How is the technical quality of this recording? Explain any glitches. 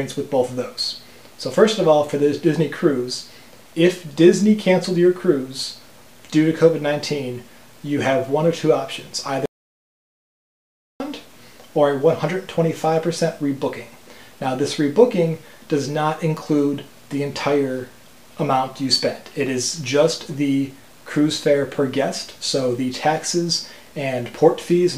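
The technical quality is poor. Two faults stand out.

Low bit depth without dither runs through the whole clip. Quiet sounds carry a grainy distortion. The grit tracks the audio, so it changes as the sound changes. Quiet passages suffer most. The softest parts sputter or fall to silence. The likely cause is a signal stored at too few levels and truncated with no dither, which fits 8-bit truncation. The error sits about 35 dB below the signal.

An audio dropout to silence occurs from 9.46 s to 11.00 s. The sound stops abruptly for about 1.54 s and then returns mid-flow. The gap is total silence, with no room tone or background at all. That points to the recorder writing silence while its input was missing. The likely cause is a disconnected device, a failed link or a brief mute. Whatever sounded during that span is lost.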